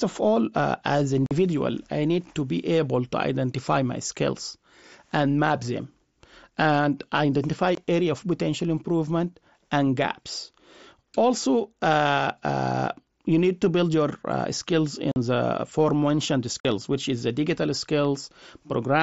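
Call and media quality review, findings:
Unconcealed Bluetooth headset packet loss: abrupt dropouts in speech at 1.26–1.31 s, 7.75–7.78 s, 15.12–15.16 s and 16.60–16.65 s (45, 23, 45, 45 ms), hard-edged. Lost headset-to-phone voice packets replaced by silence or an idle pattern, no concealment. Durations fit 7.5 ms frame multiples on the mSBC link, whose wideband speech remains audible.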